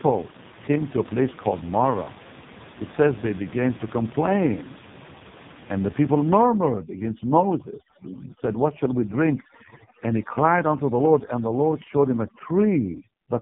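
The speech is buzzy, synthetic and muffled for its whole length, with nothing above 3.8 kHz. This is heavy AMR narrowband mobile codec damage, with a few pulses driving a vocal-tract model that fits the lowest AMR-NB mode of 4.75 kbps. From 6.43 s, right after "the people", to the end, the room noise, which sat about 17 dB below the speech, drops and breaks up into twinkling specks. That is overdone noise removal muting bands near its noise estimate, along with quiet parts of the speech.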